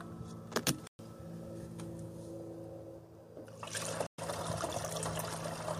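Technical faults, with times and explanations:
0.87–0.99 s and 4.07–4.19 s, Bluetooth dropout: the sound cuts out into silence for about 116 ms each time, then returns as if it had kept playing underneath, so that stretch is simply missing rather than delayed. This is likely a Bluetooth dropout, where audio packets failed to reach the headphones in time and were discarded, leaving nothing to play. Each gap's length would fit a run of roughly five lost packets.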